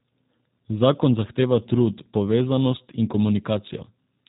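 Throughout the speech, G.729 codec damage is plainly audible: nothing passes above 3.8 kHz, and the voice sounds rough and faintly synthetic, which fits an 8 kbit/s G.729A stream. A plain low-pass would stay smooth; this buzzy graininess comes from rebuilding speech with a few pulses per frame.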